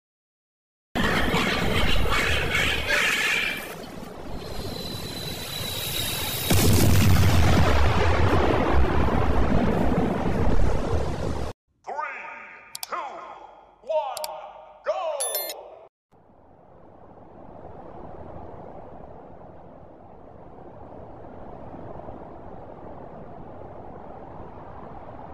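The capture began late, so there is a cut-off start: the opening 0.96 s is digital silence, and at 0.96 s the sound appears abruptly, already mid-event. It has no natural attack or fade-in, as if the beginning had been sliced away.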